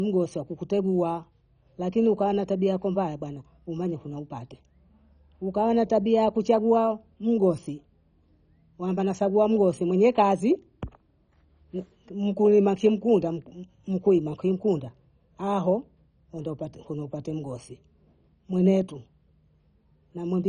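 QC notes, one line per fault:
Throughout: MP2 compression. The speech sounds dull and gurgly the whole way, with nothing above 10.4 kHz and a grainy, bubbling texture on top. This is likely MPEG Layer II starved of bits. The encoder splits the signal into 32 sub-bands and, short on bits, shuts the top ones off and quantises the rest coarsely. The damage is heavy, which fits a very low bitrate around 32 kbps, much like weak digital radio.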